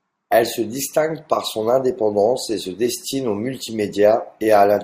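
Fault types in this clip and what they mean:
No technical faults can be heard anywhere in this speech recording. There is nothing here that needs a line of its own.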